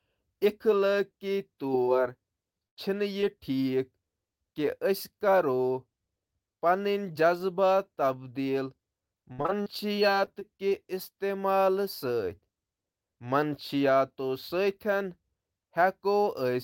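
At 1.85 s a short concealed packet loss occurs: about 20 ms never arrived, and the decoder extended the preceding sound to bridge it. It is heard as a tiny smear. A spectrogram shows a thin vertical seam where the harmonics briefly freeze before rejoining the true signal.

From 2.67 to 2.79 s a burst of packet loss removes about 100 ms. The decoder prolongs the last sound while turning it down, so it becomes a held buzz or a fading hiss before the audio jumps ahead. The waveform shows a decaying envelope, and the spectrogram shows flat, stretched partials.

At 3.21 s a second short concealed packet loss again hides about 20 ms as a brief smear.

From 9.32 to 10.73 s repeated packet loss produces choppy, robotic sound. About ten gaps, the longest 61 ms, are each patched and then followed by another. Together they cover roughly a sixth of the stretch. The spectrogram shows a comb of frozen, repeated slices, and the waveform shows repeated dips and copied cycles.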